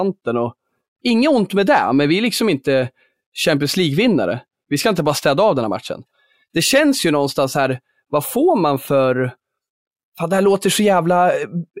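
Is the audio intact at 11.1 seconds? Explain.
Yes, the speech at 11.1 seconds plays through intact, with no dropout, click, distortion or other fault at that moment.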